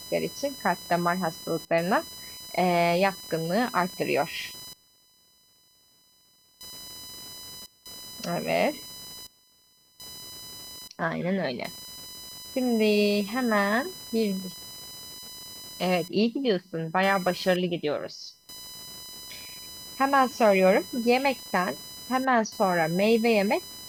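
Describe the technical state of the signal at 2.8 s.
At 2.8 s, computer activity noise sits under the speech, as it does across the whole clip: a buzzing, chirping whine near 1 kHz, roughly 20 dB down, from processor or peripheral load shifting the shared audio ground. A spectrogram shows a thin line near 1 kHz, independent of the speech.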